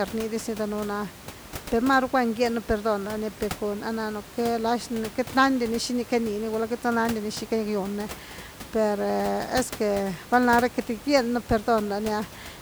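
Nothing goes wrong technically anywhere in this speech recording, so there's simply no fault to point to.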